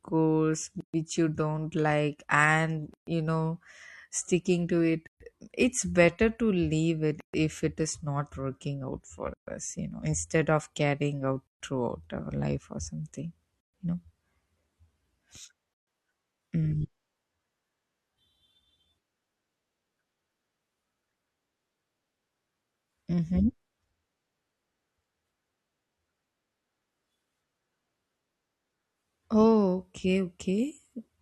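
A speech clip broken by a gap at a join of encoded pieces. About 0.13 s of silence opens at 0.81, 2.94, 5.07, 7.20, 9.34, 11.47, 13.60 and 15.74 s, after each 2 s stretch. Speech resumes where it stopped, as after "you don't like and". Separately encoded pieces were joined untrimmed, leaving encoder delay and end padding.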